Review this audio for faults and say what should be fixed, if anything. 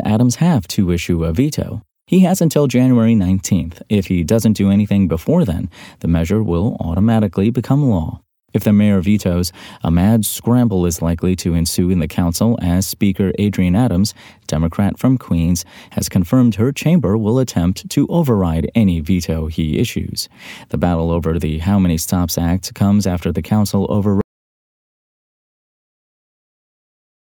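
At 24.21 s, just after "comes after the council", the speech cuts out. An audio dropout to silence runs 3.1 s to the end, with no room tone. The input was likely lost, so silence was written. Check cables, links and mute controls before recording.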